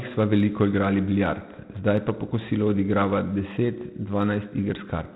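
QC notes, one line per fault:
throughout, 4-bit ADPCM compression: heavy gritty hiss riding on the speech and rising with its level, plus roughness on sharp attacks where the coder's step size can't keep up. Nothing above 3.8 kHz, so it's dull too, which fits a 32 kbps stream.
0.11–5.14 s, clock slip clicks: a soft rattle of tiny ticks about every 30 ms, each a single sample dropped or repeated. The likely cause is two devices on unsynced clocks drifting apart by roughly 700 ppm, slipping a whole sample each time.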